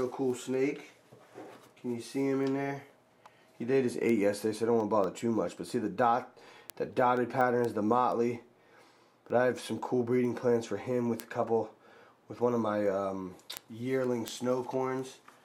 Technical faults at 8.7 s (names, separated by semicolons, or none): word clock ticks